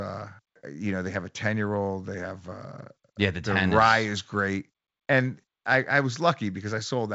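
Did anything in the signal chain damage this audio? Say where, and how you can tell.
No, nothing damaged it.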